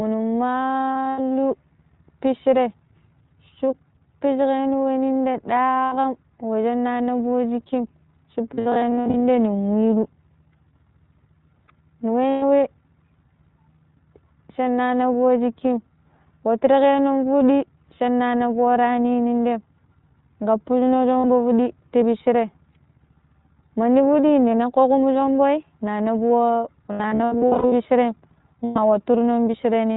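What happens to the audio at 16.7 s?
At 16.7 s, as throughout, the speech carries plainly audible iLBC codec damage: each short frame, fitting 20 ms at about 15.2 kbps, is coded independently, leaving a rough, synthetic edge. A spectrogram shows a hard empty band above 4 kHz.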